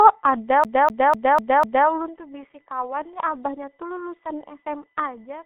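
Speech here is heard through heavy G.723.1 codec damage: it sounds muffled and hoarse with smeared consonants, passing roughly 150 Hz to 3.6 kHz, and a spectrogram shows nothing above 3.8 kHz. The density of the artefacts fits a very low rate of around 6 kbit/s. Over this sits a steady USB whine at 1 kHz and its multiples, about 35 dB below the speech and strongest near 12 kHz. It appears as fixed horizontal lines across the whole spectrogram, left by the bus's 1 ms frame activity leaking through power or ground. From 0.64 to 1.88 s the sound behaves like a CD stuck on one turn: a 249 ms fragment repeats five times with a brief mute at each jump back. On the waveform this shows as identical blocks spaced about 0.25 s apart, separated by short gaps.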